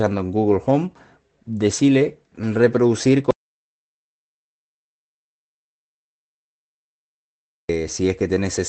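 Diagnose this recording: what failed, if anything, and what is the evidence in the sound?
The input stage failed first, at the capture end before the codec. Right after "decile reproducir", the audio dropout to silence begins at 3.31 s. It lasts until 7.69 s, about 4.38 s. The gap is silent, with no room tone at all. The recorder kept writing samples while nothing arrived. The likely cause is a lost input, such as a disconnected device or a mute. Whatever was said in that stretch is gone.

The second fault sits in the network stage of the call path. It is a lost packet rebuilt from error correction, from 7.83 to 7.89 s. There is no gap. Instead, a short stretch sounds rougher and noisier than its neighbours. The rebuilt span is about 40 ms, which fits two 20 ms Opus frames. Each lost frame was replaced by the low-bitrate copy carried in the following packet. The audio's ceiling near 8 kHz comes from the call codec.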